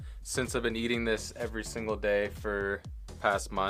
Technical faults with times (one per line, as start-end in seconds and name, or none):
none